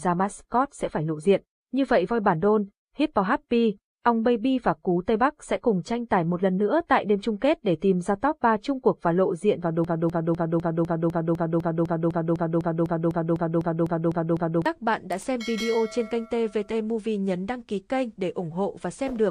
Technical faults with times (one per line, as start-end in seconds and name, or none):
9.84-14.66 broken-record loop